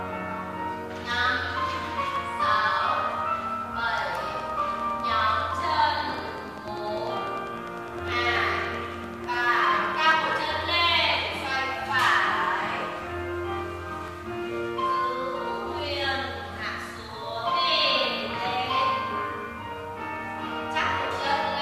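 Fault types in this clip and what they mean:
Overlap between stream segments: small slices of audio vanish where segment timestamps overlap, leaving a tiny click or skip at 2.16–2.18, 6.14–6.17, 8.12, 10.12, 14.08 and 16.04 s, spaced in a way that fits 2-second segments. On a waveform each appears as an abrupt discontinuity; on a spectrogram, as a thin vertical broadband line.
Train of clicks: from 4.40 to 10.34 s, roughly seventy similar pulses tick at a steady 10 per second, peaking around 5 dB above the sound, likely from electrical interference or a struggling interface. On a spectrogram they form evenly spaced vertical stripes; on a waveform, regular narrow spikes.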